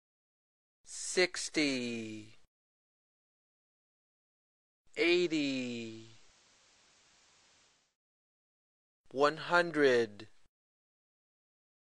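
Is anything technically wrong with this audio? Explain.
Yes. From 4.84 to 7.97 s there is digital radio blending to analogue. The receiver lost the digital stream and cross-faded to the FM broadcast over about 370 ms, then back. The FM audio drops about 1 dB and carries hiss roughly 30 dB down.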